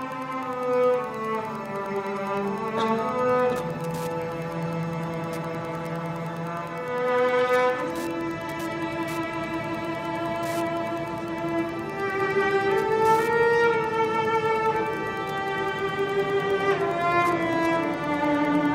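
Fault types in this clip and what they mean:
Wi-Fi interference: A steady ticking, close to ten times a second, runs through the whole clip, sitting roughly 25 dB below the main sound. A nearby Wi-Fi radio's beacon, repeating every 102.4 ms, is being picked up and rectified by the audio circuit.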